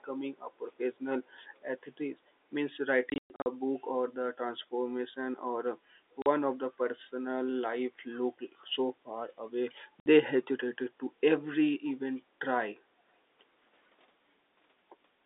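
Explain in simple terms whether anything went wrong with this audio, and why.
Echo leak at 1.24 to 1.29 s: a very faint copy of the speech returns about a quarter of a second late. This is likely the far end's loudspeaker being picked up by its microphone, with the echo canceller failing to remove all of it before sending it back.

Packet loss filled with silence at 3.1 to 3.46 s, 6.22 to 6.26 s and 10.0 to 10.06 s: pieces of the audio never arrived, and the receiver played silence in their place. The first stretch holds more than one hole, the longest 120 ms. The gap sizes fit 20 ms packets, and the holes have hard edges.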